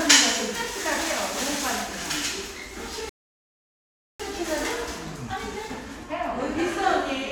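At 3.09 s a rebuffering stall cuts the sound to silence until 4.20 s. The player ran dry of downloaded audio, waited, then resumed exactly where it stopped, adding 1.1 s.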